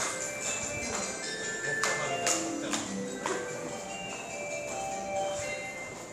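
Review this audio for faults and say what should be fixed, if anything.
No faults turn up in this audio, so nothing needs to be fixed.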